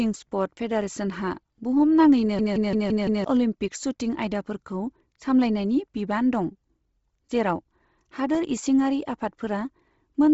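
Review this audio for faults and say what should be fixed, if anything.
The whole clip sounds grainy and breathy, with nothing above 7.7 kHz. This points to Bluetooth LC3 compression, likely at a low bitrate near 24 kbps with 7.5 ms frames. The upper band gets dropped and replaced with noise. Use a higher LC3 bitrate or a wired path.

There is a block of digital silence at 0.81 s, about 2.7 ms long, and another at 8.35 s, about 1.3 ms long. Each is an abrupt cut to silence, short enough to be heard as a tick or dip. They fit 128-sample and 64-sample blocks the program failed to fill in time. Increase buffer headroom so output is always written before playback.

A system hang loop runs from 2.39 to 3.24 s. One 171 ms piece repeats exactly five times at 5.86 Hz, which sounds like a machine-gun stutter. It fits an 8192-sample ring buffer cycling while the system stalled. About a second of audio is lost. 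Find and remove the stall in the driver or host.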